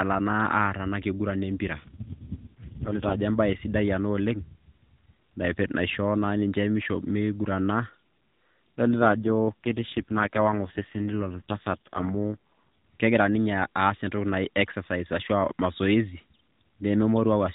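From about 1.78 to 3.22 s, and again from 8.86 to 12.37 s, the speech goes rougher and more synthetic, with a buzzy edge, then clears up. That's an AMR rate drop. The narrowband mobile codec, which sounds fairly clean elsewhere, falls back to a lower mode, which fits a drop from 12.2 to 4.75 kbps, putting bits into error protection. The band stays the same and there's no gap.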